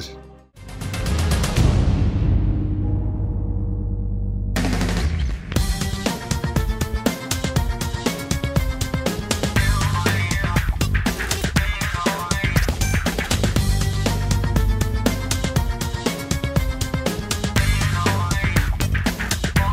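Integer overflow cracks at 7.06, 10.09, 11.57, 15.06, 17.58, 18.57 and 19.57 s. Each loud peak passes the largest integer and wraps to the opposite sign instead of being limited, producing violent, sharp cracks. On the waveform, samples flip across the full range; on a spectrogram, thin broadband vertical lines.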